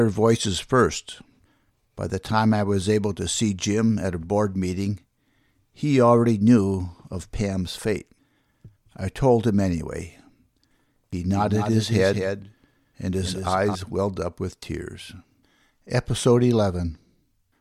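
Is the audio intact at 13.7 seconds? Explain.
No. At 13.7 seconds the speech is heard twice: a second full-band copy trails the original by roughly 200 ms, about 5 dB quieter, with no decay or room colour, so it sounds like a hard slapback rather than reverb. This doubled audio track runs from 11.33 to 13.75 s and cuts off abruptly just after the moment asked about. The likely cause is the same signal being captured again through a slower path, or an edit leaving two copies out of step.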